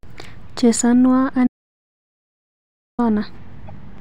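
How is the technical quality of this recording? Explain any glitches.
The recording has two clear technical faults: a long gap of digital silence and a brief decoding glitch near the end.

From 1.47 to 2.99 s there is an audio dropout to silence. About 1.5 s of speech is missing, most likely because the input was lost while recording continued. The sound stops abruptly, with no room tone, and the waveform goes flat. On a spectrogram it appears as a fully blank band.

From 3.68 to 3.70 s a corrupt frame was decoded. Damaged data in what sounds like a single compressed frame was played anyway, placing energy at the wrong frequencies. It is heard as a short chirp or blip. On a spectrogram it shows as a narrow, out-of-place vertical smear.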